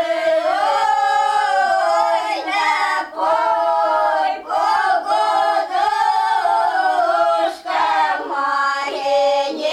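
No technical faults can be heard anywhere in the recording. The sound runs without any audible interruption or damage.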